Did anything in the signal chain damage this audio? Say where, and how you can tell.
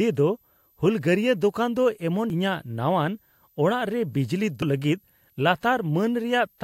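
Yes. A switching supply whistle sits under the speech throughout, drifting between 11.8 and 12.4 kHz, roughly 40 dB down. This is a power supply running in burst mode or beating with another supply, coupling into the analogue wiring.

Damaged data in a compressed stream shows as brief blips at 2.30 s and 4.62 s, the second just after "ᱨᱮ ᱵᱤᱡᱽᱞᱤ". Corrupted frames made the decoder lose sync.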